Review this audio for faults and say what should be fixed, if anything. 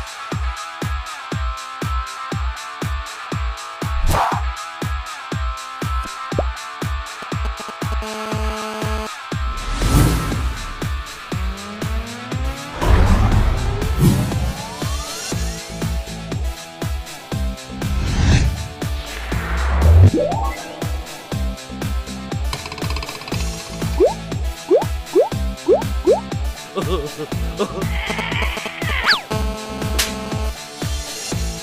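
GSM signalling bursts turn up twice, 7.22 to 7.94 s and 28.10 to 29.15 s. You get that galloping dit-dit pattern of ticks and brief 217 Hz buzzes, a nearby 2G phone signalling while the circuit rectifies its pulses. The first sits roughly 10 dB down, the second about level with the sound. Keep phones off or well clear of the rig.

GSM phone buzz follows each time, from 8.02 to 9.07 s at about 7 dB below the signal and from 29.31 to 30.50 s at about 9 dB below. It's a steady, raspy 217 Hz buzz thick with harmonics, which means the phone has moved into a call and is bursting continuously. Balanced, well-shielded cabling with RF filtering on the inputs would stop it.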